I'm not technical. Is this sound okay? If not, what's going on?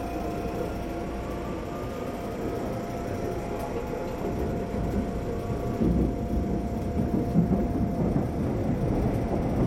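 No. Compressed frames skipped at 9.05 s: about two short chunks of sound were lost or rejected as damaged, so playback jumps ahead by about 50 ms.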